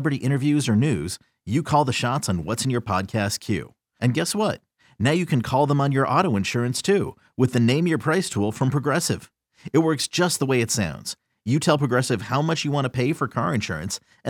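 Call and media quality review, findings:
No findings in this call and media quality review: the speech shows no audible faults.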